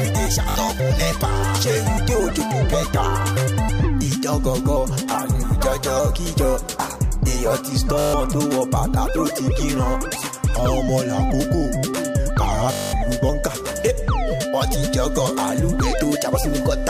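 Bluetooth stutter shows up three times: 0.50 to 0.56 s, 7.99 to 8.14 s, and 12.73 to 12.93 s, lasting 61, 142 and 203 ms. Packets went missing, so the receiver kept looping its last slice, giving a buzzy machine-gun repeat before the sound jumps ahead.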